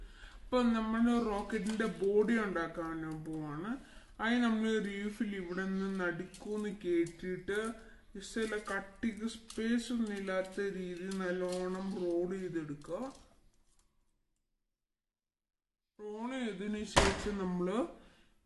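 From start to finish the whole thing runs slow and low, the classic wrong sample rate problem. Everything plays at about 0.73 times normal speed and sits roughly 5.5 semitones flat, with tempo and pitch dragged down together by the same ratio. That pairing fits audio captured at 44.1 kHz being clocked out at 32 kHz with no conversion, so the sound feels heavy and sluggish throughout.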